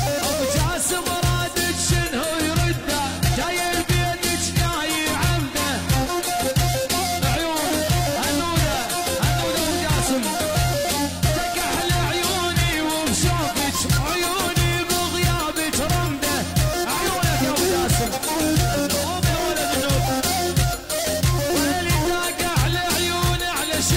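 From 1.70 s to 13.70 s the adaptive stream drops to a lower bitrate: the slowed connection forces a leaner encoding, and the treble drops with swirly codec artefacts, which fits a low-rate HE-AAC stream. A spectrogram shows the top band sharply truncated near 14.9 kHz, while the waveform runs continuously with no gap at either switch.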